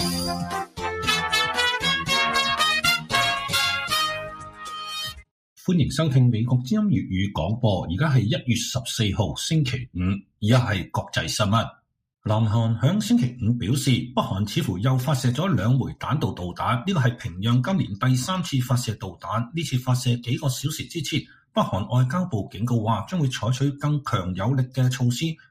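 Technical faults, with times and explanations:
Throughout: noise suppressor applied to music or sounds. A speech-oriented suppressor treats steady tones, ambience and decays as noise, so the gain keeps shifting by around 10 dB. Unlike a compressor, it leaves onsets intact while sustained parts pump and thin.
0.4–0.84 s, 2.98–3.13 s, 4.17–5.24 s, 10.22–10.43 s, 18.96–19.25 s, 21.22–21.56 s, 25.34–25.5 s: sound cut by the noise suppressor. Each stretch sinks by about 13 to 18 dB, deepest near 18 dB. These are brief dips in which held or fading material is pulled down and tails are cut short, not dropouts, since transients still come through.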